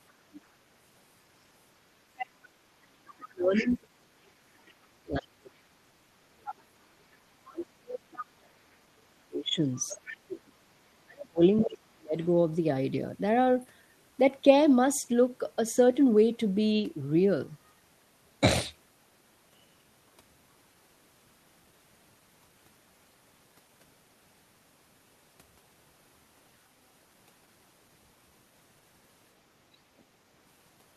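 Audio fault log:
0.08–0.41 s, 2.17–3.69 s, 6.45–6.55 s, 8.17–8.25 s, 9.89–13.65 s and 29.99–30.03 s: other side's voice leaking through. A second, fainter voice sits under the talker. It is strongest at 2.17–3.69 s, roughly 10 dB below the speech, and barely there near 30 s, about 40 dB down. This is likely loudspeaker echo that the echo canceller left in the microphone signal. On a spectrogram it shows as a weak, separate harmonic stack that does not line up with the main voice.
2.43–12.16 s: speech suppressed in double talk. While the far side is also talking, the talker's own speech repeatedly dips or drops out, about seven seconds in total, with the deepest cut roughly 35 dB. This is likely the echo canceller failing to tell the two voices apart and attenuating both. In the waveform the envelope shows sudden troughs mid-phrase. On a spectrogram the energy, especially the upper bands, blanks out in patches.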